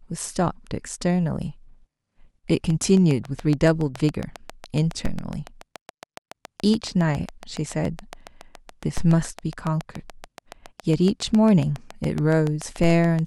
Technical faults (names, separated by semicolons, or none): train of clicks; DC step